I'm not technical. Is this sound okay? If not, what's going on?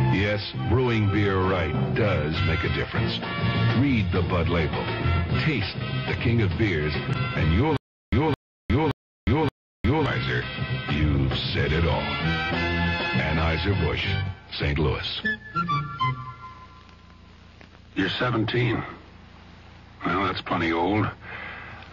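No. There is a stutter with silent gaps from 7.77 to 10.06 s: a fifth-of-a-second burst repeats four times, each followed by about a third of a second of dead silence. The playback likely stalled, replaying its last fragment at each retry, so the audio meant for those seconds is lost.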